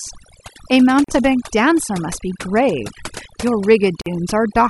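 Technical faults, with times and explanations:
Throughout: overdone noise removal. The noise reducer was set too strong, so it cuts individual frequency bands to nothing whenever they sit near its noise estimate. The background drops and breaks up into twinkling specks, and quieter parts of the speech vanish too.
1.04 s and 4.02 s: gap at a join of encoded pieces. Separately encoded segments were joined untrimmed, so each one's start-up delay and padded final frame remain. Silences of about 42 ms and 48 ms cut into continuous speech with smeared edges, then the sound resumes where it stopped.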